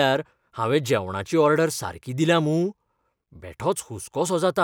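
No technical faults occur in the speech, so there is nothing to describe in time order.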